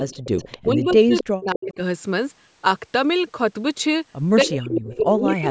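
From 0.0 to 0.68 s there is echo leak: a faint copy of the speech trails 260 ms behind at about 20 dB down, likely loudspeaker pickup the echo canceller missed. On a spectrogram it appears as a weak, time-shifted duplicate of the harmonics.

From 0.58 to 1.8 s, speech suppressed in double talk pulls the level down by as much as about 40 dB, likely the canceller ducking everything while both sides overlapped. The waveform envelope shows deep, chopped hollows there, and shorter echo fragments return at 1.18–1.24 s and 1.62–1.74 s.

From 4.44 s to the end the suppression comes back, dipping about 30 dB. Further echo bursts appear at 4.44–4.57, 4.75–4.95 and 5.25–5.36 s, each about 10 to 15 dB below the speech.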